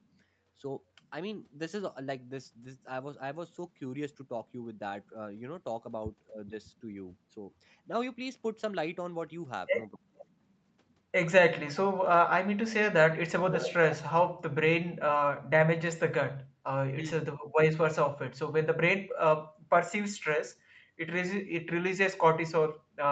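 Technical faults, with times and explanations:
10.16 to 10.25 s and 13.48 to 13.74 s: echo leak. A delayed copy of the speech comes back 419 ms after the original. The first scrap is faint, about 25 dB below the speech. The second is much stronger, only about 5 dB below. The likely cause is a far end playing the call on a loudspeaker. Its echo canceller missed part of what its microphone picked up and sent it back.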